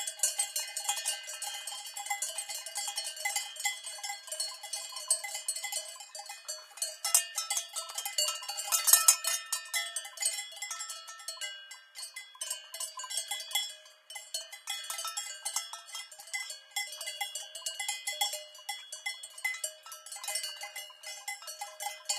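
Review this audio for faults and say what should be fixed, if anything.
A doubled audio track runs from the very start of the clip to 5.96 s. A second full-band copy of the sound trails the original by about two seconds at roughly 5 dB lower. It has no decay or room colour, and it cuts off abruptly at 5.96 s. On a spectrogram, every event in that stretch reappears as a fainter, identical shape two seconds later. The waveform shows matching envelope bumps and a sharp drop in density at 5.96 s. The likely cause is a second, slower capture path or an edit that left an out-of-step copy mixed in. To prevent it, route the source through a single capture path and check edits for stacked duplicate regions before export.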